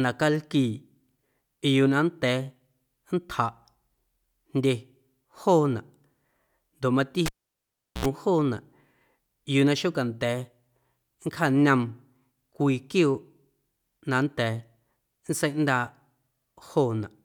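A speech recording with a cable pulled and plugged in between 7.26 and 8.06 s. A pop at 7.26 s marks the live connector coming out, followed by near silence for about 0.75 s while the signal path is open. As the plug goes back in, a burst of 60 Hz mains buzz lasting 75 ms appears while only the tip is making contact, ending in a second pop at 8.06 s when the full connection returns.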